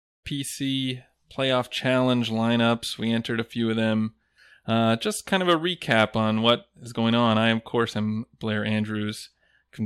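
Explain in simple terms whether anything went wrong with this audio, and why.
Nothing went wrong with the recording; the speech simply rises gently from silence over the first quarter-second, reaching full level by about 0.26 s, the way an editor would ease it in.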